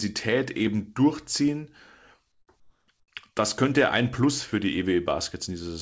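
Comfort noise in place of the background appears three times in brief pauses in the speech: 2.32 to 2.48 s, 2.60 to 2.88 s, and 3.00 to 3.08 s. The background, already about 50 dB below the loudest speech, gives way to a smooth, featureless hiss that drops by about 11, 6 and 9 dB. The likely cause is the sender halting transmission when no speech was detected, with the receiver synthesising noise to fill each gap.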